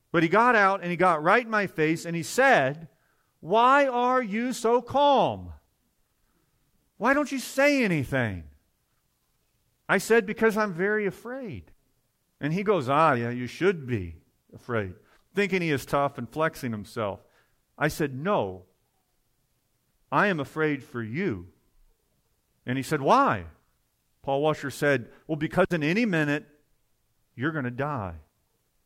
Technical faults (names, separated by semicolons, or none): none